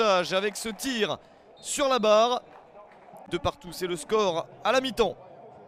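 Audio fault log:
3.50–3.67 s, one channel drops out: for about 0.17 s the level falls abruptly by about 6 dB, then returns just as suddenly to its previous level. The drop is clean and step-like, with no fade at either edge. This is likely one side of a stereo pair going silent before the mono sum: material shared by both channels loses half its contribution, giving the 6 dB dip, and anything present only in the lost side vanishes for that interval.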